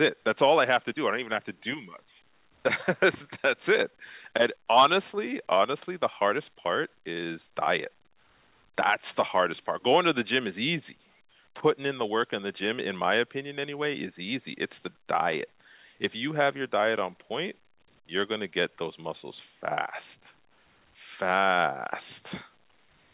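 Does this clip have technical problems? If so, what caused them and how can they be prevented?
No, this clip has no technical problems.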